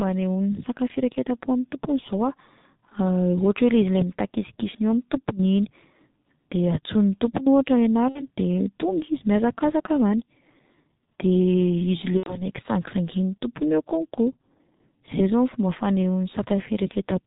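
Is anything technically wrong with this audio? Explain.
Yes. Throughout the speech, the sound is muffled and hoarse: nothing above about 4 kHz comes through, consonants smear together, and the voice has a rough, grainy texture. This is heavy G.723.1 codec damage. The codec packs speech into 30 ms frames at a very low rate, which fits roughly 6.3 kbit/s here. It models the voice coarsely and updates that model slowly, so fine detail and crisp onsets are lost.

At 8.09 to 8.28 s, and again at 12.17 to 12.47 s just before "sangisangian'ny tompony eo", the speech briefly turns into a stretched, smeared sound that fades and stays weak before recovering. These are VoIP packet loss concealed by the speech codec. About 60 ms of audio is missing in the first gap and 90 ms in the second, which fits two and three lost 30 ms frames. The decoder fills each gap by repeating its last pitch and spectral shape at falling gain. 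Because every frame builds on the one before, the distortion continues briefly after the real audio returns.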